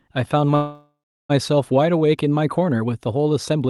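From 0.55 to 1.31 s a call audio freeze occurs, likely because packets stalled in transit and the jitter buffer ran dry. The last sound is stretched into a fading buzz, then about 0.36 s of silence. The speech resumes where it stopped, with nothing lost, but 740 ms later.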